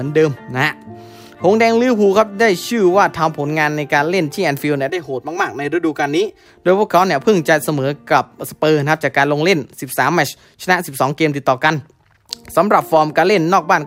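From 4.90 to 6.46 s, channel delay causes comb filtering: one channel arrives roughly 3 ms late, and summing to mono cancels shared content at evenly spaced frequencies from around 200 Hz upward. It sounds hollow and phasey, and a spectrogram shows regular horizontal dark notch bands.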